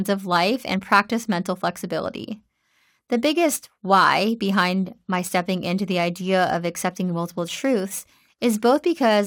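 Speech runs throughout with a gritty, inharmonic fizz from crude rate conversion. Samples were repeated to change rate without filtering, which fits a 44.1 kHz to 48 kHz step. The error sits roughly 25 dB below the speech. A spectrogram shows faint spurious lines unrelated to the voice's harmonics, and a zoomed waveform shows small repeated-sample steps.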